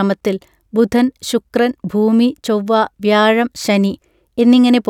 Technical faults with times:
none

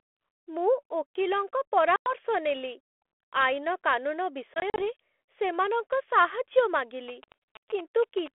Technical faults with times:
1.96-2.15 packet loss on an ADPCM call
4.54-4.83 packet loss on an ADPCM call
7.08-8.28 GSM signalling bursts
7.24-7.34 packet loss on an ADPCM call

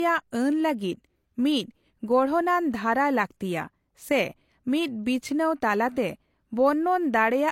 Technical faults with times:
0.00-7.52 low-bitrate audio saved at a high bitrate

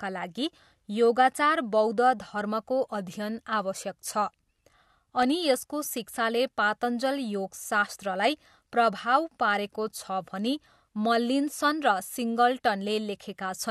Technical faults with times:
5.23 electrical switching spike

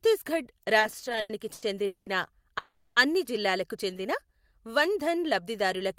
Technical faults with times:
0.79-2.08 repeated stalls (stutter)
2.58-2.98 call audio freeze
3.91-4.72 jitter buffer slow-down

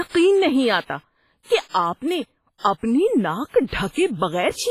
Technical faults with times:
0.00-4.70 WMA compression

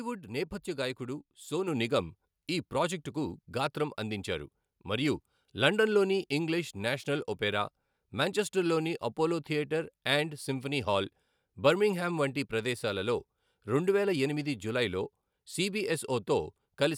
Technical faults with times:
1.68 microphone volume stepped up

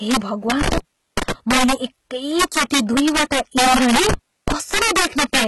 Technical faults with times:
0.00-5.47 integer overflow
0.00-5.47 HE-AAC compression
0.61-1.32 intermittent contact
4.09-4.52 intermittent contact

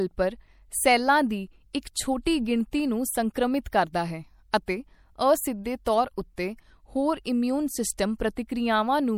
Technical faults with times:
0.00-9.18 MP3 compression
2.25 pre-echo

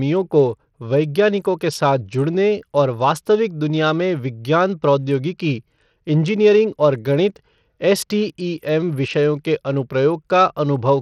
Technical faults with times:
0.00-11.01 Bluetooth SBC compression

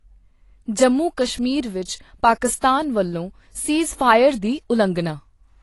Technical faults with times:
0.00-5.63 AAC compression

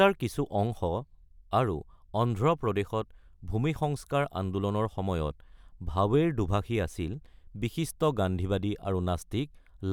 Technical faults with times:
none

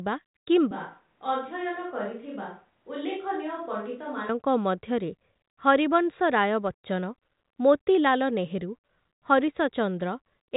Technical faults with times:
0.71-4.29 switch to a distant microphone

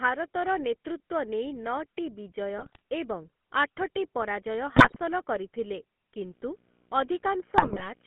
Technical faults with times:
0.00-8.06 GSM full-rate codec
2.58-2.82 GSM bit errors
4.76-4.99 GSM bit errors
6.30-8.06 video or display buzz
7.58-7.88 GSM bit errors

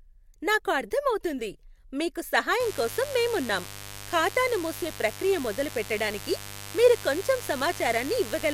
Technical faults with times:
2.60-8.53 mains buzz

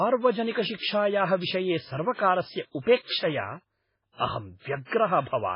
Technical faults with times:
0.00-5.55 MP3 compression

